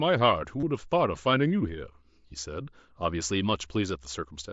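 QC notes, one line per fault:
0.60–0.63 s, concealed Bluetooth headset packet loss: for about 30 ms the sound keeps going but turns into a short buzzy, held tone, then a slight warble as real audio resumes. The phone filled the missing stretch by repeating the closest-matching piece of the preceding waveform, which fits a few consecutive lost headset frames on the mSBC link. Unlike a plain dropout, there is no silence or click, just a brief looped, pitched buzz at full level.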